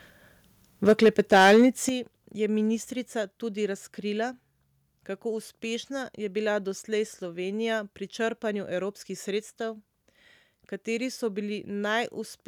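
From 0.87 to 1.66 s the speech has microphone overload: peaks are driven about 7 dB past full scale, with about a tenth of the samples flattened, giving a harsh, crackling edge. On the waveform the tops are squared off, and the spectrogram shows broadband smearing above the harmonics. At 0.89 s and again at 1.89 s the level drops in single steps of about 4 dB and then about 9 dB, with voice and background falling together. This is microphone volume stepped down, likely the call software cutting input gain after detecting the clipping. The waveform envelope shrinks abruptly at each point.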